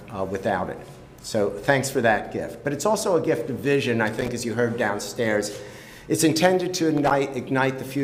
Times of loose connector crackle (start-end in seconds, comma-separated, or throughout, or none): 4.07-4.28, 6.97-7.11